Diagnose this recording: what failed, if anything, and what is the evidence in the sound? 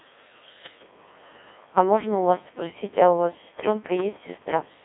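The failure is at the codec stage: the whole clip has passed through a Codec 2 vocoder. The speech is robotic and buzzy throughout, confined to roughly 250 Hz to 3.6 kHz, with nothing above 3.8 kHz, and the damage is heavy. The synthetic quality fits a rate around 1.6 kbit/s. A plain narrowband or lossy waveform codec would keep the waveform and only blur or smear it, but here the decoder rebuilds the voice from sine waves using only pitch, voicing, energy and a spectral envelope.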